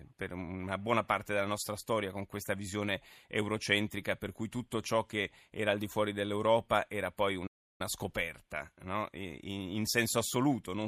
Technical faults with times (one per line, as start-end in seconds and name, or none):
7.47-7.81 playback stall